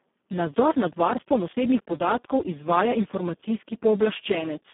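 From start to end the speech carries heavy Speex codec damage, consistent with a very low setting near 4 kbps. The CELP coder has too few bits for the excitation, so the voice sounds hoarse and noisy, confined to a 200 Hz to 3.5 kHz band with nothing above 3.8 kHz.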